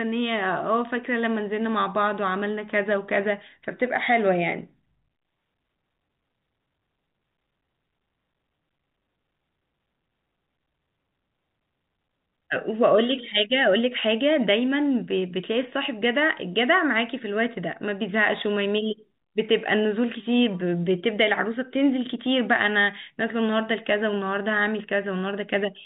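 Nothing goes wrong anywhere in this speech, which simply carries the narrow telephone sound of G.711 A-law coding at 64 kbps, topping out around 4 kHz with only the faint hiss that rides along with the level of the talking.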